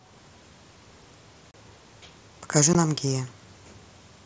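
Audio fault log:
1.51–1.54 s and 2.73 s, unconcealed Bluetooth headset packet loss: the sound drops out for about 30 ms, then about 15 ms, with abrupt edges. Packets between headset and phone went missing and nothing was synthesised to cover them, unlike concealed loss, which smears or repeats sound across the gap. The mSBC link still carries speech up to 8 kHz around both holes.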